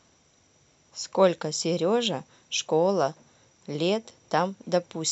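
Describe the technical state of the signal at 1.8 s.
At 1.79 s the speech drops out for a block of digital silence lasting only 0.15 ms. For that instant the signal cuts straight to silence and then resumes, with no fade in or out. That usually happens when the output buffer isn't filled in time. Because the hole is so brief, it isn't heard as a gap. The two abrupt edges merge into a brief tick or dip in the audio.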